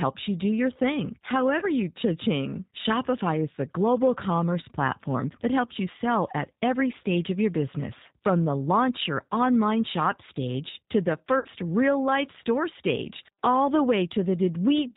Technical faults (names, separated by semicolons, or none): G.729 codec; VoIP packet loss concealed by the speech codec